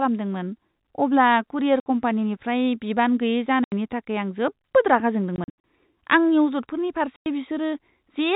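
At 1.80 s, right after "अब्ला कुरियर", the speech drops into a 60 ms hole; further gaps of 80 ms at 3.64 s and 100 ms at 7.16 s follow, and after "जोबोद रागा" at 5.36 s about 180 ms vanishes in several pieces spread over 0.28 s, none longer than 80 ms. This is packet loss filled with silence. Every gap is a multiple of 20 ms, which fits 20 ms packets over the G.711 telephone path. The gaps are silence with hard edges rather than the smeared repeats of concealment.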